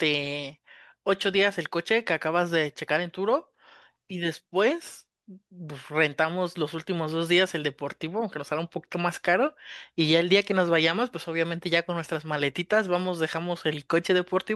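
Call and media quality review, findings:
No faults found in the speech recording. Nothing to escalate on this ticket.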